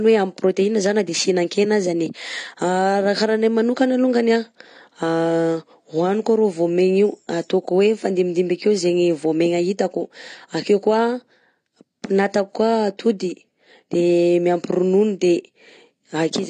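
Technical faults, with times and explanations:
Throughout: AAC compression. The speech sounds dull and smeared, and the damage is plainly audible. The top end is cut away, so consonants lose their crispness. Sibilants take on a fizzy, swirling texture, and sustained vowels warble. This is likely lossy AAC-LC coding at a low rate, which fits about 32 kbps. At that rate the encoder lowers its cut-off, drops detail it judges less audible, and leaves gaps in the spectrum or fills bands with substitute noise.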